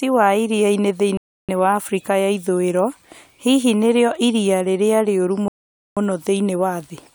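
Rebuffering stalls at 1.17 s and 5.48 s: the player exhausted its downloaded audio and paused until more arrived. After "wa iriainĩ" the speech drops to silence for about 0.31 s, and after "nĩrio iria rĩrĩa rĩũru" for about 0.49 s. Each time it resumes exactly where it stopped, so nothing is lost and only time is added.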